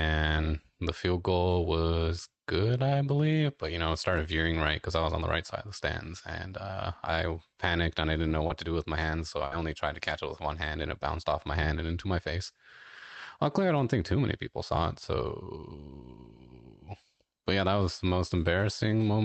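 A speech recording carried over a WebRTC-style call path, band-limited at 8 kHz as fits Opus at a modest bitrate, with two packet-loss faults. The first is a short concealed packet loss from 8.47 to 8.52 s, after "and I didn't know" and before "to do with my". About 20 ms of audio never arrived in time and was synthesised by extending the preceding sound, heard as a brief smear. On a spectrogram it shows as briefly frozen, overly regular spectral content, and the waveform shows a small seam where the real signal resumes. The second is a burst of packet loss from 9.46 to 9.53 s, between "with my hands so" and "only tried to catch". Roughly 60 ms went missing, and the decoder held and faded the last sound before jumping ahead. It appears as a flat, smeared band and a decaying envelope on the waveform.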